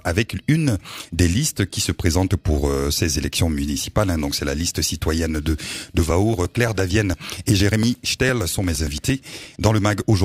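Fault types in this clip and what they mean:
Periodic USB or driver dropouts: From about 5.99 s to 10.13 s the sound breaks up into regular ticks, one every 115 ms. Something keeps stalling the USB link or the audio driver at a steady rate. Each time, a short piece of audio, around 10 ms, never arrives. It is skipped outright rather than filled with silence, so the signal jumps forward with a click. About forty of these clicks follow one another in an even, mechanical rhythm.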